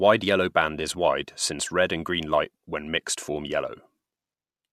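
At 3.49 s, just after "light when mixed form", the speech drops into a brief dip. This is AAC frame loss with muting. The decoder zeroed the missing audio, and the overlapping windows fade it out and back in. The gap lasts about 10 ms, which fits a single lost frame, likely from the low-delay AAC stream carrying this speech.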